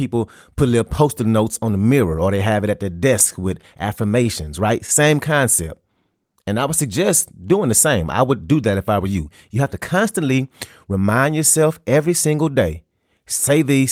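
Right after "have it at their", from 3.19 to 5.54 s, there's a run of scattered short gaps: around ten tiny packet holes, none longer than about 15 ms. The receiver papered over each by stretching the previous sound, so you get brief ticks and little smears.

Overlapping that, from 5.01 to 7.12 s, leading into "doing the same I", a jitter buffer slow-down kicks in. The receiver repeated pitch periods to rebuild its reserve, adding 98 ms, so the speech drags at 96% speed with the pitch unchanged and sounds slightly drawn out.

Then from 9.55 to 10.97 s, between "if I were you" and "yourself every single day", comes a jitter buffer speed-up. The buffer had too much queued, so the receiver snipped out pitch periods, roughly 100 ms worth. Delivery runs at 106% speed with the pitch held and comes across a bit hurried.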